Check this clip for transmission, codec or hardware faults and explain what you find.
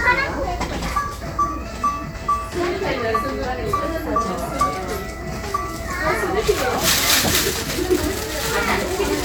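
No transmission, codec or hardware faults can be heard anywhere in this recording of sounds. Nothing in it calls for further explanation.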